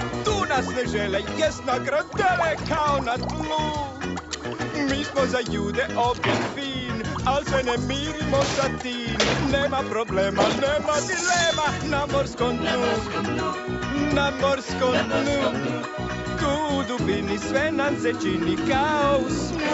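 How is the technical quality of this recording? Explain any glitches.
No glitches can be heard: the audio carries the ordinary character of a call connection, with the low bass trimmed by the microphone processing and nothing above 8 kHz, which fits an Opus call codec running in its wideband mode.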